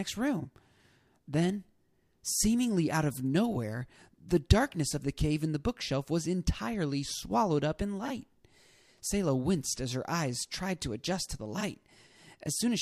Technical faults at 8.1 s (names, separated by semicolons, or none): frames out of order